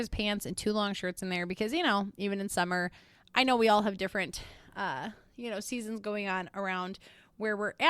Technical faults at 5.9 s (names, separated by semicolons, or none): none